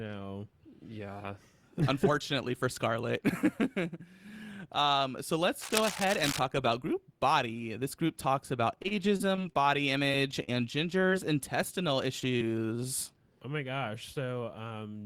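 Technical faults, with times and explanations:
5.61–6.39 s, cable scratch noise: Dense, uneven crackling sits over the speech at about 5 dB below it, ending just before "about group body". It is likely a worn cable or connector being moved. On a spectrogram it shows as ragged broadband streaks, and the waveform has spiky bursts.
8.75–9.60 s, repeated packet loss (robotic sound): Right after "group talks about", a string of dropouts, the longest about 29 ms, is patched by stretching the preceding sound. This leaves choppy speech with pieces missing. A spectrogram shows smeared, repeated harmonic slices, and the waveform shows looped segments.
10.44–10.49 s, 11.09–11.14 s and 12.20–12.23 s, short concealed packet loss: Roughly 40, 20 and 20 ms of audio went missing. Each hole was filled by continuing the last sound and then blended back, which makes brief smears or wobbles. A spectrogram shows short frozen or blurred patches, and the waveform shows small discontinuities.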